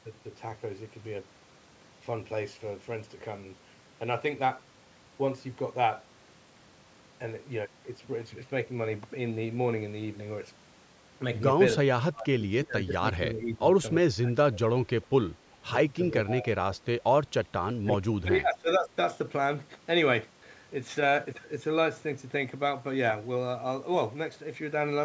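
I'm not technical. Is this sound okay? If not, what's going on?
No. Speech suppressed in double talk: when both sides likely spoke at once, the call's echo canceller turned the voice down, so it dips or cuts out at 11.84, 12.11–13.79, 14.09–14.33, 14.5–14.6, 15.55–15.74, 16.23–17.11 and 17.44–18.9 seconds. Echo leak: the other side's loudspeaker setup likely failed to remove all its echo, so a very faint copy of the voice, delayed by 0.39 seconds, slips back briefly at 15.02–15.06 seconds.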